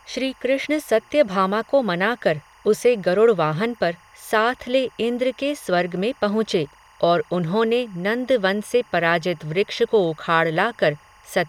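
Timecode bleed runs throughout: linear timecode at 24 frames per second has leaked from a neighbouring track or cable into the speech. Its square wave flips between tones near 1 and 2 kHz, a steady chirping warble about 30 dB below the voice.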